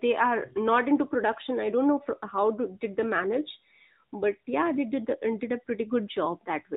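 Throughout the speech the sound is boxy and telephone-like, with a plainly audible buzzy, synthetic edge and nothing above 4 kHz. This is the AMR narrowband mobile codec: the bandwidth limit and the texture fit AMR-NB at 10.2 kbps, which rebuilds the voice from a vocal-tract model and a few pulses per frame.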